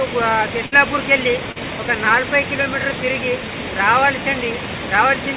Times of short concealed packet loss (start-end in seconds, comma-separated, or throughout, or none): 1.52-1.57